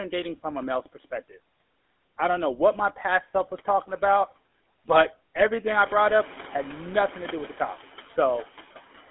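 Noise suppressor artifacts run through the whole speech recording: the suppressor pulls down about 14 dB of steady background noise frame by frame, so the noise dips in pauses and returns under the speech, and the room noise rises at about 5.5 s. GSM full-rate codec coloring is also present throughout: the band is confined to roughly 250 Hz to 3.5 kHz, and the vocal-tract model driven by sparse, regularly spaced pulses gives a plainly audible buzzy, gravelly roughness, consistent with 13 kbps full-rate coding. GSM bit errors strike from 5.36 to 5.45 s, between "was talking about but" and "I brought up had": corrupted filter, pitch and gain values reach the decoder, bending the spectrum and spiking the level into a brief squawking, gargled burst that points to about four damaged frames.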